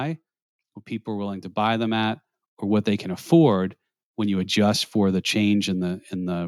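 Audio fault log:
1.05–2.96 s, automatic gain rising: the level creeps up by about 7 dB over roughly two seconds, voice and background swelling together, because the gain control decided the input was too quiet and eased its gain upward; it settles just before "can afford when you".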